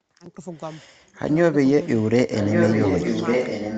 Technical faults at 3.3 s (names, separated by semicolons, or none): echo leak